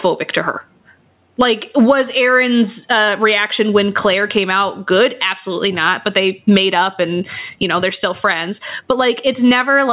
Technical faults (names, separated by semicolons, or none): gain pumping